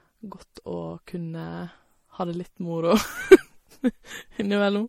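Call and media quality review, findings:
Speech, entire clip: band-limited with nothing above 16.6 kHz; two layers of artefacts heard together. Likely transcoding between lossy codecs: artefacts point to an MP3 encode near 48 kbit/s re-encoded as Vorbis near 53 kbit/s. Vorbis spent bits on the MP3 damage, kept the lowest cut-off in the chain, and added its own artefacts.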